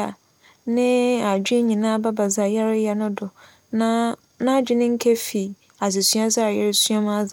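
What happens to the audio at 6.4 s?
Nothing goes wrong at 6.4 s; the speech runs through that moment intact, with no dropout, click, glitch or other fault.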